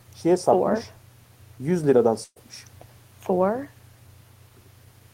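At 2.23 s a burst of packet loss hits the speech and lasts until 2.40 s. About 120 ms of audio never arrives. The receiver stretches the last sound for 125 ms, fading it out. Roughly 40 ms of silence follows. The speech then resumes with a chunk missing.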